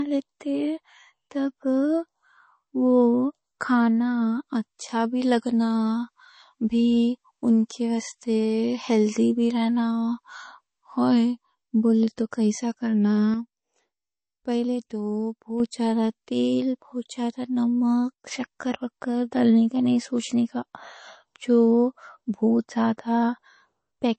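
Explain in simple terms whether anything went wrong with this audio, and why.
Two things stand out in this speech. First, it sounds like low-bitrate audio saved at a high bitrate: nothing comes through above about 8.4 kHz, so it's dull and a bit swirly. The likely story is a small, squeezed MP3 that was later saved again as a bigger MP3, which can't bring back what the first one threw away.

Second, there are sudden gain jumps. At 13.34 s the level drops abruptly and stays down until 15.6 s. At 18.14 s a shorter, deeper dip lasts until 18.26 s. Each time the voice and the background drop together with no fade, most likely from a volume change applied without a smooth ramp.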